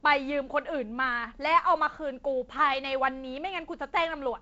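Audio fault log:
No faults logged; the speech runs over G.722 wideband telephone coding at 48 kbit/s, with nothing above 7.7 kHz and only the light noise expected from the lower band's reduced bit allocation.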